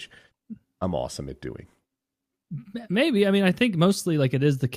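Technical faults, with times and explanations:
No technical faults are present; the speech signal stays continuous and stable for its whole duration.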